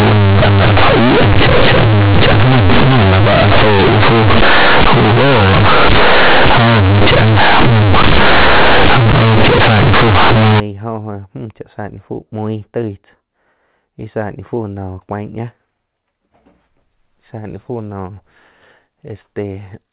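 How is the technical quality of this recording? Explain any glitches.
The recording has one serious fault, covering its first half. From 0.0 to 10.6 s the speech is companded audio read as linear: mu-law bytes are played as plain 8-bit samples without expansion, so each sign change swings the output across about half its range. Quiet moments become as loud as speech, producing harsh, buzzy distortion with strong noise in the pauses. On a waveform this looks like a dense, uniformly loud block. A spectrogram shows broadband energy filling every gap. After 10.6 s the speech is carried as G.711 telephone audio, with nothing above 4 kHz.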